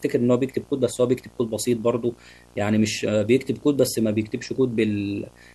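A steady buzz at 59.94 Hz with a fizzy hash above it runs under the speech from start to finish, roughly 25 dB down, joined by a thin whine at 15.7 kHz. This is video or display buzz: a screen or video cable is leaking its field and line rates into the audio.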